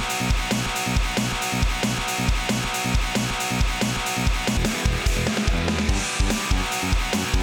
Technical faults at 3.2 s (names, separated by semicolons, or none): broken-record loop